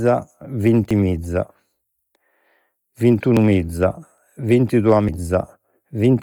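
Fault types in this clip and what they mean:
Bluetooth LC3 compression: The speech has a breathy, grainy edge throughout, heavy enough that the upper spectrum sounds partly replaced by hissy noise, which is likely the work of the LE Audio transform codec running at a low rate, one that fits around 32 kbps with 10 ms frames. Unlike a plain low-pass filter, which simply dulls the top end, this noise filling leaves the highs present but synthetic and rough.
dropped buffer (overrun): Four times, at 0.91, 3.37, 4.18 and 5.09 s, the speech jumps straight ahead, skipping about 20 ms, 50 ms, 20 ms and 70 ms respectively. The likely cause is the program failing to collect samples before the hardware overwrote them, so the two sides join directly. What sets it apart from a dropout is that no silent gap is left. The sound lurches forward.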